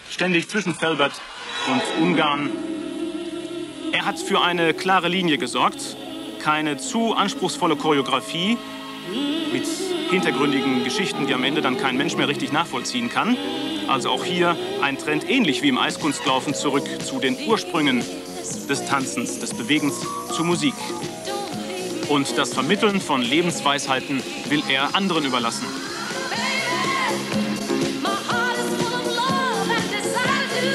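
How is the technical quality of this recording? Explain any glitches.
The opening seconds are degraded, then the quality jumps up. From 0 to 4.0 s the sound is thin and smeared, with nothing above 11.5 kHz and strong codec artefacts. This is an adaptive stream starting at a low bitrate. The player began on a cheap version to start fast. The sound points to a very low HE-AAC rate, around 12 kbit/s. At 4.0 s it switches, likely to AAC-LC near 96 kbit/s. The treble returns at once, with no gap.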